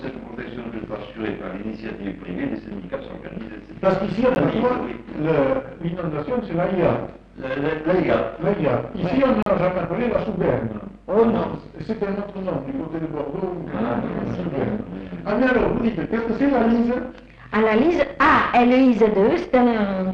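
At 4.35 s and again from 9.43 to 9.46 s, the sound drops out briefly, likely a Bluetooth stall where the buffer ran dry, with gaps of 12 ms and 37 ms.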